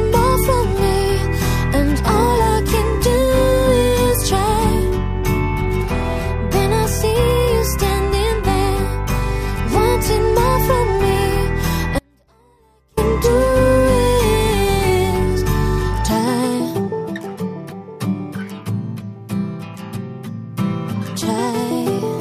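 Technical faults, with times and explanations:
11.99 to 12.97 s, audio dropout to a faint residue: the sound cuts out abruptly for just under a second, leaving a faint leak roughly 40 dB down, then returns. The likely cause is a feed lost on a still-live path. The hard edges rule out a pause or fade.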